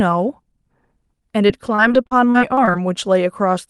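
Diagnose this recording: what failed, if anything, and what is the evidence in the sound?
The network stage failed, showing as repeated packet loss (robotic sound) from 1.47 to 2.76 s in this speech clip carried over a call path. Twelve gaps land close together, the longest 36 ms. The jitter buffer patches each by extending the last decoded sound, which gives a choppy quality. About 270 ms is filled this way and 320 ms is lost. On a spectrogram, harmonics flatten into short frozen bands with brief dropouts; the waveform shows repeated periodic cycles between ragged breaks.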